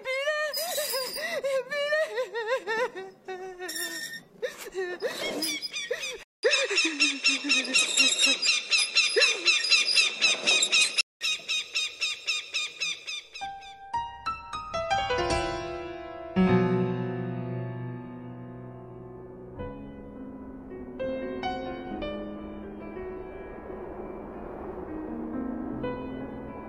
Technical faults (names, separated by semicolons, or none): input switched to a poorer device